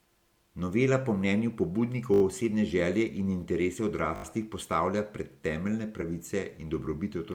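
Speech, with two repeated buffer stutters, at 2.14 to 2.22 s just before "osebne želje in interese" and at 4.16 to 4.24 s just before "postavlja pred temeljne". In each, a 20 ms piece plays four extra times with hard joins, giving an 80 ms stutter, after which the speech resumes exactly where it stopped. Compressed frames skipped at 6.01 to 6.03 s, after "postavlja pred temeljne", is different. Nothing repeats. Instead the audio jumps ahead by about one 20 ms frame.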